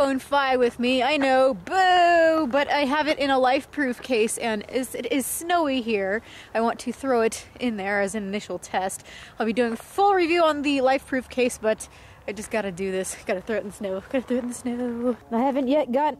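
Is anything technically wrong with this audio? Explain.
No, nothing here sounds technically off, and the audio comes through without any problems worth pointing out.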